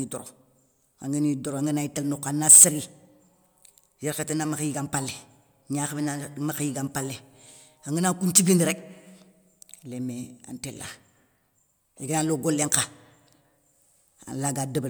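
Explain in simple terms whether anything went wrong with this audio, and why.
Nothing went wrong here.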